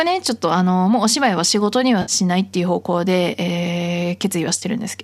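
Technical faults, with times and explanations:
2.02–2.12 s and 4.60–4.63 s, AAC frame loss with concealment: brief smeared, noisy patches where the sound blurs instead of continuing cleanly. Audio data went missing, roughly 60 ms then 20 ms, and the decoder patched each gap from the last good spectrum. The short frames point to the likely low-delay AAC coding.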